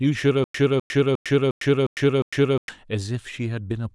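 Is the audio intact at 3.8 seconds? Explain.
Yes, the speech is intact at 3.8 seconds, with no dropout, click, distortion or other fault at that moment.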